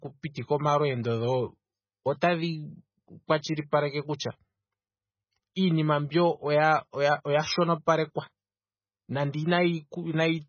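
Speech throughout is likely heavily MP3-compressed at a very low bitrate, around 16 kbps, cutting everything above 6.5 kHz and leaving a watery, swirling quality. At 2.21 s, pre-echo spreads quantisation noise about 15 ms ahead of a sharp attack, adding a brief hiss and softening its onset.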